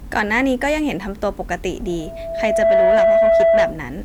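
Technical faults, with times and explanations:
1.86–3.81 s, loudspeaker feedback squeal: a steady 662 Hz tone rises over roughly a second until it sits about 10 dB above the speech, as the microphone re-amplifies its own loudspeaker output. Spectrogram shows one bright horizontal line; the waveform envelope swells then holds.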